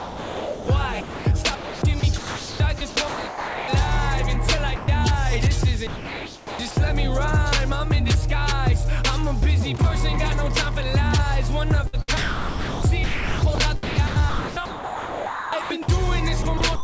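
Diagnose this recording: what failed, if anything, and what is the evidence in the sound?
The stage is call processing, with sound dropped by the voice detector. From 0.00 to 0.68 s, 1.01 to 1.25 s and 4.76 to 4.88 s, the sound gives way to steady synthetic noise. The likely cause is the sender's detector judging sound as background and stopping sending, so the receiver plays comfort noise instead.

The same stage also shows sound chopped by the voice detector. At 1.55 to 3.68 s, 5.87 to 6.77 s, 11.87 to 13.58 s, 13.83 to 15.88 s and 16.42 to 16.84 s, the sound is choppy. This is likely the detector toggling repeatedly, with comfort noise filling each gap. Above it all sits a clean cut-off at 8 kHz, which fits a G.722 call codec.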